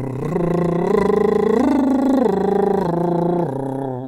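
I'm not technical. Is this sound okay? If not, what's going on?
Yes, this music has no audible faults anywhere in the clip, so there's nothing to fix.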